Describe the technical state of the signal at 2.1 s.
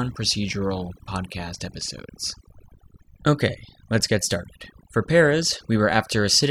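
At 2.1 s you're hearing overdone noise removal, and it's not a one-off: it runs through the whole clip. The denoiser was pushed too hard, so any frequency band it judges close to the noise floor gets pulled way down or shut off, taking the softer parts of the speech with it. The gaps between phrases drop away and break up into little twinkling specks.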